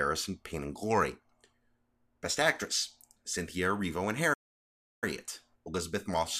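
It's a speech clip with a playback stall: at 4.33 s the audio just drops to silence mid-flow and stays dead for roughly 0.69 s, picking up again at 5.04 s. That's likely the player running dry of data or its thread getting blocked.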